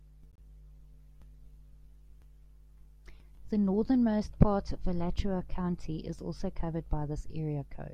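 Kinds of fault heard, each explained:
Corrupt frame decoded: damaged bits in a couple of compressed frames got played anyway, so energy landed at the wrong frequencies. It shows as a brief, faint chirp, squeak, blip or burst of noise from 0.31 to 0.39 s in the speech, peaking at only about -50 dBFS.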